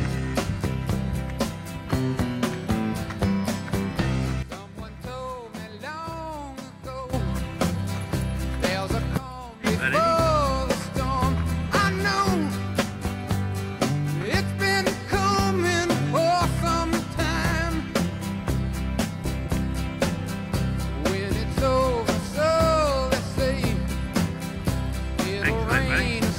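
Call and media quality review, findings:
Sudden gain jump, 4.43 to 7.13 s (about 12 dB down) and 9.17 to 9.64 s (about 13 dB down): sound and noise floor drop together, then return abruptly. Waveform shows vertical step edges, spectrogram uniform darkening across all frequencies. Likely an unramped digital gain change.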